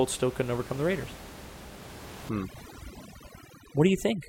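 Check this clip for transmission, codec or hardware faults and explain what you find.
One fault turns up here, from 2.29 s to the end. Overdone noise removal: a denoiser set too hard starts gating bands near its noise estimate, so the room noise, sitting about 15 dB below the speech, collapses into twinkly specks.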